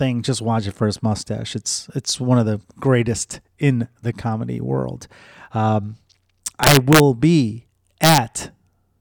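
At 6.63 to 7.00 s and again at 8.04 to 8.18 s the speech breaks into violent cracks, the signature of integer overflow. The gain pushes the loudest peaks only about 1 dB past the integer limit, but instead of being held there they wrap to the opposite sign. On the waveform those peaks jump from one rail to the other. A spectrogram shows each crack as a bright vertical broadband stripe.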